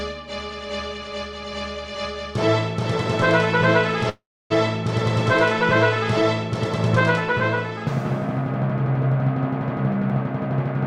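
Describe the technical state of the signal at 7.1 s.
At 7.1 s the signal is intact, with no audible fault at that moment.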